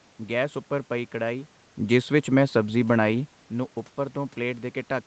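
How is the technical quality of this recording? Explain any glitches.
No glitches: the speech rides a call path band-limited to 8 kHz over audible room noise, and the level shifts around 1.5 s and 3.5 s are the talker moving relative to the microphone, not a system fault.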